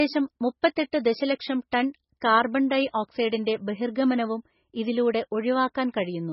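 Throughout, the speech sounds dull and watery, with nothing above 5.6 kHz and swirling, heavily damaged detail, likely from MP3 compression at a bitrate near 16 kbps.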